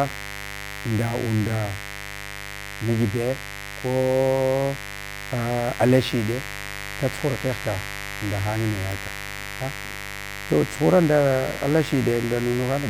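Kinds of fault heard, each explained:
Mains buzz, throughout: a steady, raspy buzz sits under the speech for the whole clip, and it is loud, only roughly ten decibels below the talker. Its fundamental is 50 Hz, with a dense stack of harmonics reaching up into the kilohertz range. That points to sharp switching spikes from a dimmer, rectifier or poorly shielded cable getting into the signal path twice every mains cycle, rather than a clean hum.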